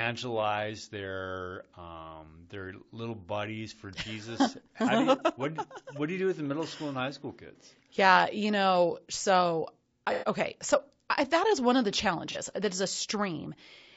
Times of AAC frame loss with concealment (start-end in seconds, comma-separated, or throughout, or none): 1.70-1.75, 10.13-10.27, 12.32-12.37